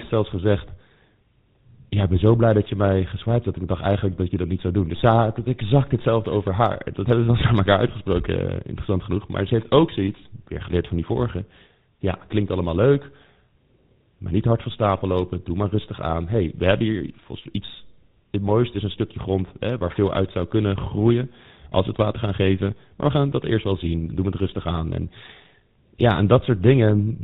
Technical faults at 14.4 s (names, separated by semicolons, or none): GSM full-rate codec